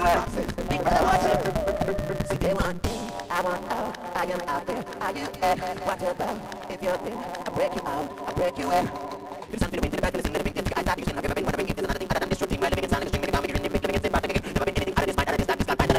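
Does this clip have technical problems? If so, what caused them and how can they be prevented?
Yes. There is a block size mismatch (truncated) throughout. The writing stage produces longer blocks than the reading stage takes, which fits a 256-sample read. Each block's tail is discarded. This causes a 172 Hz buzz, and the audio runs 1.88 times fast at near-normal pitch. Matching block sizes between stages prevents it.

Frames out of order occur at 1.77 to 1.86 s and 2.59 to 2.66 s. In each stretch, two neighbouring runs play swapped, about 78 ms and 52 ms long respectively. You hear a garbled flutter. Reordering frames by sequence number before decoding prevents it.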